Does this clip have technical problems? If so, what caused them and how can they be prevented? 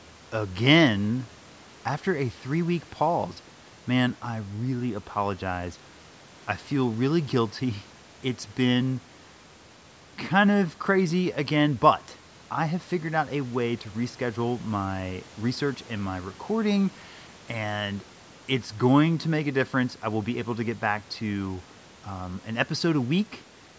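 No, there are no technical problems in this speech clip, so nothing needs preventing. It has been through a call's microphone processing, which leaves nothing above 8 kHz and trims the lowest bass with its high-pass filter, as that path normally does.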